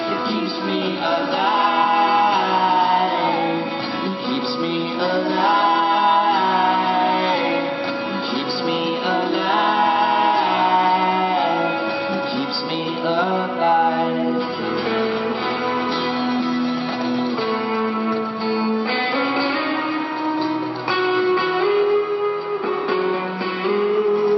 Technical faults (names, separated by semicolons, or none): none